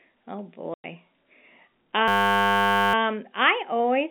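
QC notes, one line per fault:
0.74 to 0.84 s, packet loss filled with silence: a 100 ms hole cuts the speech with hard edges. The gap length fits five lost 20 ms packets replaced by silence. Unlike a hang loop, nothing repeats; the sound stops dead, then resumes.
2.08 to 2.94 s, system hang loop: a 10 ms slice of audio repeats exactly, 86 times, producing a steady 100 Hz buzz rather than a silent gap or stutter. The short repeating buffer sets the buzz pitch, and little or no audio is lost once playback resumes, still band-limited by the G.711 telephone line.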